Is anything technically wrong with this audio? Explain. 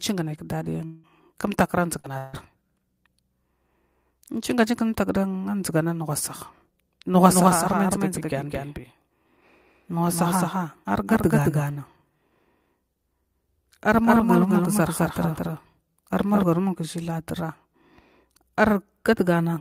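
Yes, there are four kinds of fault.

Long network dropout: From 0.85 to 1.06 s and again from 2.18 to 2.36 s, a stretch of audio most likely never arrived. The receiver bridged each hole, about 180 ms and 160 ms, by extending the last sound into a fading buzz, and speech resumes with that portion gone.

Short concealed packet loss: Between 1.99 and 2.07 s, roughly 40 ms missed the decoder's deadline. The receiver patched it by continuing the preceding sound and blending back into real audio, leaving a brief smear or wobble where a short sound may drop out.

Lost packet rebuilt from error correction: At 2.04–2.06 s and 2.33–2.35 s, single 20 ms packets were lost but rebuilt from low-bitrate copies carried in the following packets. There is no gap, but those instants sound rougher and noisier.

Doubled audio track: From 7.28 to 16.44 s, a second copy of the speech is likely being mixed in through a slower path. 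It trails by about a fifth of a second at about 5 dB quieter, with no room colour, and starts and stops abruptly.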